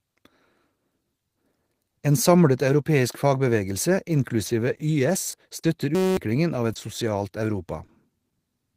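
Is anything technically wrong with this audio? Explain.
Yes, the speech has three kinds of transmission and playback fault.

Short concealed packet loss occurs at 4.47 s, just after "samlet europeisk fagbevegelse", and again at 5.31, 5.61, 6.73 and 7.86 s. Each time about 20 ms of audio never arrived, so the receiver extended the preceding sound and blended back, leaving a brief smear or wobble.

A short stall from a late packet occurs at 4.77 s. The packet came about 20 ms late, draining the jitter buffer. The receiver held the last sound until it arrived, then resumed without losing anything, giving a momentarily prolonged, faintly buzzy sound.

A system hang loop runs from 5.95 to 6.17 s. While the system froze, the hardware kept replaying a 5.33 ms slice, which fits a 256-sample buffer, about forty times. The result is a steady 188 Hz buzz that replaces roughly a fifth of a second of speech.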